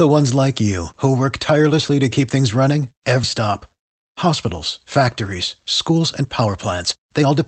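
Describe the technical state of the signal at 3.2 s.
Right after "to keep things running", around 3.23 to 3.25 s, there's a skip ahead: about a second of speech got dropped in transit or by an overflowing jitter buffer, so playback jumps straight forward with no gap, the two sides butted together almost seamlessly.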